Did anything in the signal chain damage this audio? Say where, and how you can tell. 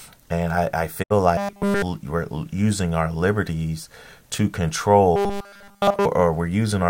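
Yes. At the broadcast receiver, there's a digital broadcast dropout from 1.02 to 1.12 s. The speech fades out over about 20 ms and goes silent, with roughly 64 ms of audio gone, which points to a couple of corrupted frames the receiver muted until clean ones arrived.

At the driver or buffer stage, the speech turns into a rigid, metallic 200 Hz buzz from 1.37 to 1.82 s and again from 5.16 to 6.05 s. That's likely robotic sound from repeated short buffers, with essentially all of it a 5 ms chunk looped while fresh audio failed to arrive.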